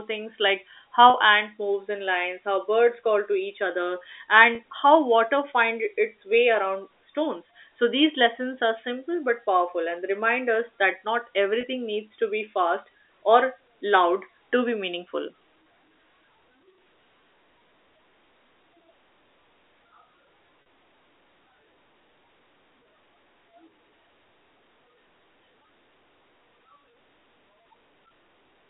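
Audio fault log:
1.10–1.14 s, 4.55–4.59 s, 11.61–11.63 s and 20.62–20.66 s: packet loss with pitch repetition. Gaps of 40 ms, 40 ms, 20 ms and 40 ms, which fits runs of 10 ms packets, are filled by repeating the last pitch cycle, so each sounds like a brief buzzy hold rather than a dropout, after "things like", "call to each other" and "remind us that not", over the narrowband telephone line.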